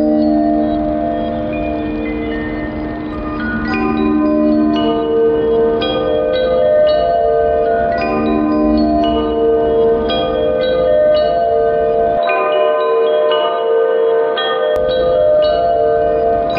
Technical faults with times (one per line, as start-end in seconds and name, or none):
12.17-14.76 input switched to a poorer device